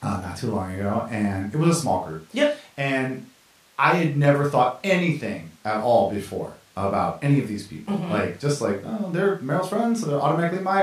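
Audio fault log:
The speech signal is technically intact throughout, with nothing in it that registers as a fault.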